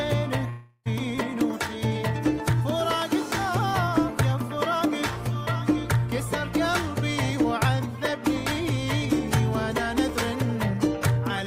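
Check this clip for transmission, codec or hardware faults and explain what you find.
One fault stands out. From 0.49 to 0.87 s there is a long network dropout: the sound smears into a fading buzz for about 360 ms, then about 40 ms of silence, and resumes with the gap's content missing, likely because packets stopped arriving and the receiver concealed the loss.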